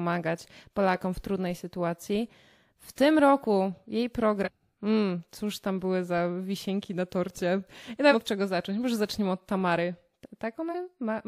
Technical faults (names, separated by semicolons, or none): compressed frames skipped